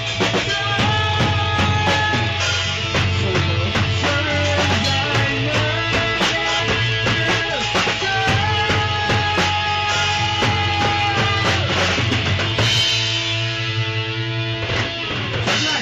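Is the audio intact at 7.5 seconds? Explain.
No. At 7.5 seconds you're in the middle of a jitter buffer speed-up running from about 7.18 to 8.11 s. The receiver had more audio queued than it wanted, so it kept snipping out short chunks, each a pitch period or a few long, to drain the backlog. That plays the sound about 20% faster with the pitch unchanged, so that stretch comes across as rushed, and around a fifth of a second of material is gone.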